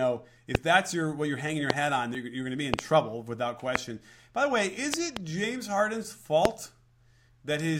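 Loud pops break into the speech six times. The first comes at 0.55 to 0.57 s. Another falls at 1.70 to 1.72 s, between "what you're hanging your" and "hat on". A double pop follows at 2.74 to 2.81 s, after "going to be", before "trouble without". Single pops land at 3.76 to 3.78 s and 6.45 to 6.47 s. Another double pop comes at 4.94 to 5.19 s, after "the way is". Each peaks around 25 dB above the speech. The speech continues underneath. The cause is likely a sudden voltage step, perhaps from a switch, static or a driver glitch.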